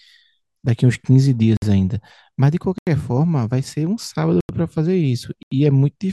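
Blocks of digital silence cut into this speech at 1.57 s (53 ms), 2.78, 4.41 and 5.43 s (85 ms each, fitting 4096-sample buffers left unfilled), cutting abruptly in and out.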